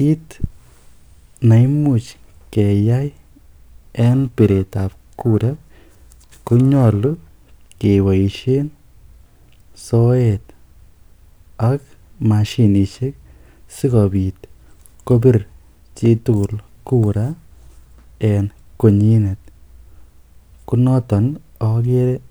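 The speech clip suffers periodic clock jitter from about 4.00 to 7.15 s: interference wobbles the converter's sampling clock at around 1 kHz, spraying sidebands at that spacing around every component, strongest on high frequencies, giving the sound a rough, metallic edge that disappears in pauses.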